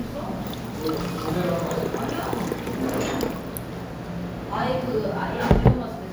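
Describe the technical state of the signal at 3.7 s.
The signal at 3.7 s is intact, with no fault present at that moment.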